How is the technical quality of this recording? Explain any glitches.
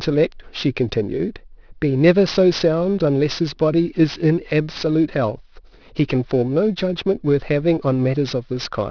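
The recording is compromised by aliasing, present for the whole clip. Sibilant consonants sound gritty and metallic, with harsh, unrelated tones folded back below 5.5 kHz at around 20 dB under the speech. The sample rate was lowered without an anti-aliasing filter, which fits a drop from 24 kHz to 11 kHz, so content above 5.5 kHz mirrors down into the audible band.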